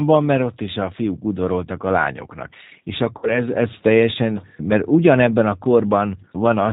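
From start to end the speech carries G.729 codec damage: a slightly rough, synthetic quality from a model-based coder that fits 8 kbit/s. A spectrogram shows nothing above 4 kHz, with harmonics smeared into blocky 10 ms frames.

From 3.18 to 3.41 s, VoIP packet loss concealed by the speech codec: the decoder extrapolates from its last pitch and filter into a fading sound, consistent with about 50 ms lost, then recovers weakly into "ez teljesen mert ugyanebben". The waveform shows a decaying stretch.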